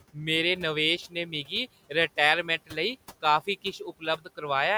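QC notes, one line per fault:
1.09–1.52 s, 2.43–2.77 s and 3.64–4.42 s, speech cut by the noise suppressor: the suppressor mistook parts of the speech for noise and pulled them down with the room noise, which sits about 21 dB below the speech. The dips reach about 17, 15 and 18 dB, after "मेरे नवेश", before "लेई काफी" and after "लेई काफी". Only a fifth to a third of a second in each span is hit, so the sound goes faint and swallowed rather than stopping outright, unlike a dropout's hard gap.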